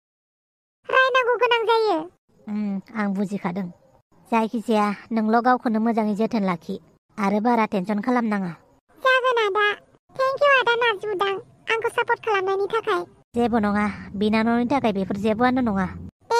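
No technical faults are audible, and the smooth fade-in at the top is complete by 0.85 s with no click or hard edge.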